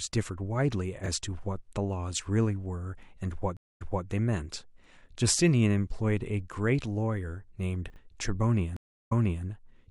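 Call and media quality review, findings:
Chunks out of order, 1.04–1.08 s and 7.90–7.96 s. Brief jumbled stretch with hard joins. Jitter buffer or writer placed 20 ms chunks late, one chunk late at first, two chunks late at second. No audio lost, only misordered.

Stream reconnect, 3.57–4.06 s and 8.77–9.45 s. Silence of 234 ms, then 343 ms. Player dropped the connection and restarted the decoder. Playback resumes earlier, by 261 ms then 340 ms. This repeats recent audio, which fits a server burst resend.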